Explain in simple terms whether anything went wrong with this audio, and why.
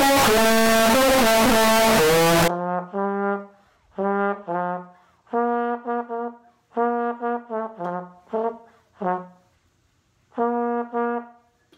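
For the first 2.48 seconds the sound turns into a loud, harsh, almost square-edged buzz, with background noise as loud as everything else. That's likely a float read as integer: 32-bit float samples decoded as 32-bit integers, so the number format scrambles the levels.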